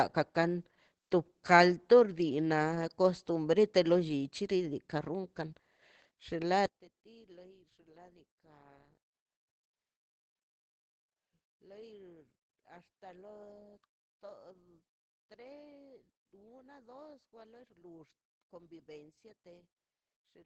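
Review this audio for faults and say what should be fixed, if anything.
Opus voice compression runs through the whole speech clip. At 12 kbps in SILK mode with wideband audio, everything above 8 kHz is cut, and the excitation is coded coarsely, so the speech sounds muffled, hoarse and faintly robotic. On a spectrogram this shows as a hard ceiling at 8 kHz with smeared, grainy harmonics below it, changing in 20 ms blocks. Prevent it by encoding at a higher bitrate, where the codec keeps the full band and finer detail.

One channel inverted affects the audio from 6.66 s to the end. When the two channels are summed, the sound common to both cancels, and the level drops by about 26 dB, leaving only a faint residue of the speech. The likely cause is reversed polarity on one stereo channel. The waveform of the mono sum collapses to near flatness at 6.66 s. A spectrogram of the sum goes suddenly pale across all frequencies there. 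Prevent it by checking channel polarity in the chain and monitoring the mono sum with a correlation meter.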